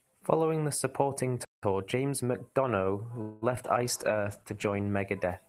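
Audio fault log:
1.45–1.63 s, playback stall: the speech cuts out to silence for about 180 ms and resumes where it stopped. This is likely the player running dry or being blocked. The gap is true silence, with no buzz filling it, which sets it apart from a call freeze.
1.63–2.35 s, time-compressed catch-up: after the stall the speech runs at 1.25 times normal speed with its pitch unchanged. The player drops and cross-fades tiny pieces to clear its backlog, so the delivery sounds hurried rather than higher-pitched.
3.21–3.44 s, call audio freeze: the last sound is stretched into a fading buzz for about 204 ms, with no silence, and the speech then carries on with nothing lost. This is likely a jitter buffer that ran empty while packets were delayed. It differs from the stall because the pause is filled.
3.56–3.59 s and 3.63–3.66 s, short concealed packet loss: two brief smears, about 20 ms of real audio missing in each. 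The decoder patched each hole by continuing the previous sound and blending it back in. Each is a momentary wobble, far shorter than the freeze.
3.87–5.00 s, call bitrate drop: the encoder's rate falls from 32 to 13 kbps and stays at the low rate for about 1.04 s. The coarser coding makes the speech watery and muffled, with less high-frequency detail. Nothing stops or is missing, which distinguishes it from the gap-type faults above.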